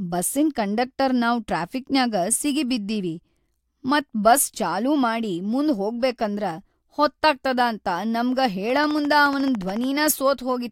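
A train of clicks runs from 8.70 s to 9.85 s in this speech recording: about fifteen near-identical pulses at a steady 14.1 per second, peaking a little above the level of the speech itself. Their regular spacing and uniform shape suggest a repeating electrical disturbance rather than anything acoustic, likely interference from nearby equipment or an interface briefly failing. They come through as a fast, even ticking laid over the sound.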